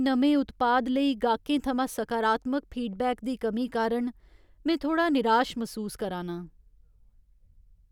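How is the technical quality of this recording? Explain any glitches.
No audible glitches or faults.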